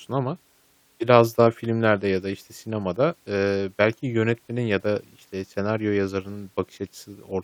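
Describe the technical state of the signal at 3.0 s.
The speech at 3.0 s plays through intact, with no audible fault at that moment.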